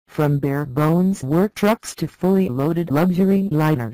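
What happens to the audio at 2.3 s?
The signal is driven about 10 dB past what a stage can pass, so hard clipping flattens peaks throughout, giving harsh crackling fuzz on loud moments.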